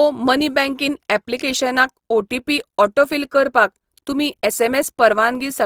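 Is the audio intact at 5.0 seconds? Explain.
No. At 5.0 s the speech carries Opus compression damage, present through the whole clip and plainly audible. The sound is grainy and rough, which is likely the CELT music mode holding each band's energy but filling starved bands with noise or folded copies, consistent with roughly 24 kbps. On a spectrogram, harmonics blur into speckled noise texture while energy still reaches a sharp ceiling at 20.4 kHz, with few empty holes.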